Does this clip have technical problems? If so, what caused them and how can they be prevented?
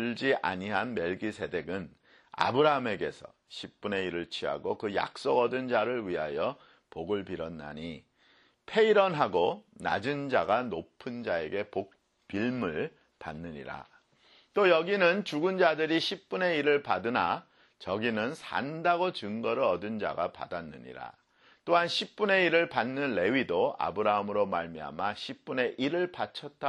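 No, nothing in this clip points to a technical fault, so there is no cause to trace and nothing that needs preventing.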